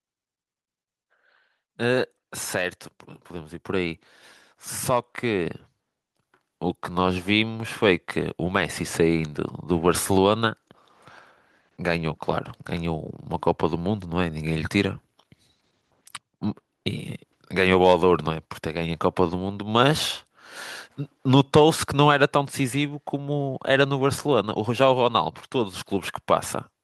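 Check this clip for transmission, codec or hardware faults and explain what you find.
There's one fault. At 5.46 s the microphone volume steps up: the call software raised the input gain about 5 dB in one go, so speech and background jump louder together.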